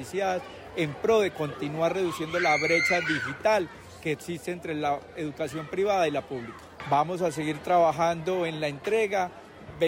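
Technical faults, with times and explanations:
No technical faults can be heard in this recording.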